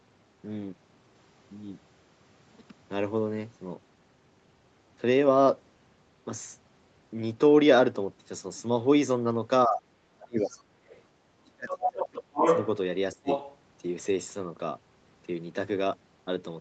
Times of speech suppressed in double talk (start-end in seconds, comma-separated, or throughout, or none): 9.66-9.82, 10.17-10.81, 11.47-12.44, 13.13-13.28